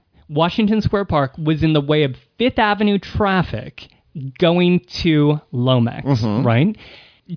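No technical faults can be heard anywhere in the recording.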